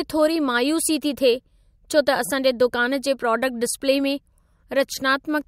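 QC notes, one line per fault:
No faults found on the speech track; nothing to flag.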